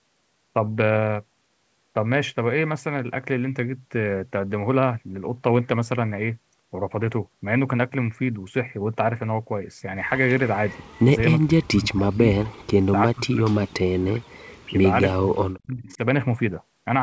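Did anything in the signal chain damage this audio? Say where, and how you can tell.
Yes. Speech suppressed in double talk, most likely the call's echo canceller acting on the send path, pulls the speech down five times: 11.4–12.27 s, 12.85–12.95 s, 13.12–13.49 s, 13.67–14.26 s and 15.14–16.0 s. The deepest cuts, at about 40 dB, nearly silence the speech, while the short dips are shallower, around 15 to 25 dB. On a waveform the envelope caves in abruptly, and a spectrogram shows full columns fading to near-empty.

An echo leak, likely residual loudspeaker pickup that the canceller failed to remove, appears at 15.9–15.97 s as a brief scrap of the speech repeated about 359 ms late and roughly 30 dB below the direct level. A spectrogram shows a faint copy of the earlier speech pattern, sitting below the 8 kHz ceiling of the call band. On the waveform it is only a low ripple at the tail of the last suppressed stretch.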